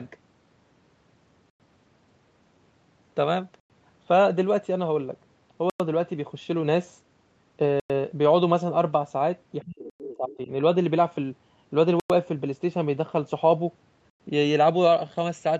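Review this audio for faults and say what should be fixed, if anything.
Gap between chunks: the speech stops dead for 100 ms at 1.50, 3.60, 5.70, 7.80, 9.90, 12.00 and 14.10 s. The holes arrive with clockwork regularity, one after every 2 s of audio. That pattern points to the stream being delivered in 2-second blocks, with the player or codec inserting padding or starting each block late instead of joining them seamlessly. No audio is lost, but each join breaks the flow audibly. To prevent it, buffer ahead and schedule each chunk to start exactly where the previous one ends, trimming any codec padding.

Speech suppressed in double talk: between 9.65 and 10.50 s the speech dips and breaks up in pieces, dropping by around 30 dB at its deepest, with roughly 0.7 s affected in total. This span also contains the chunk gap at 9.90 s. The likely cause is an echo canceller that could not tell the near talker from loudspeaker echo while both sides spoke, so it turned everything down. 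To prevent it, use an echo canceller with proper double-talk detection and a less aggressive suppressor. The 8 kHz band limit comes from the Opus call path and the microphone processing and is expected.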